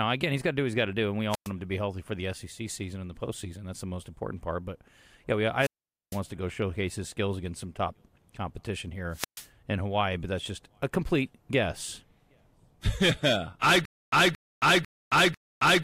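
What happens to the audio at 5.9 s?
At 5.9 s the speech falls into a wireless microphone squelch dropout, spanning 5.57 to 6.20 s. The analogue FM radio link from the microphone weakens. As it fades, hiss and static swell briefly. Then the receiver's squelch shuts the output off, leaving a hole of near silence lasting about 457 ms. Once the signal recovers, the squelch reopens and the speech resumes.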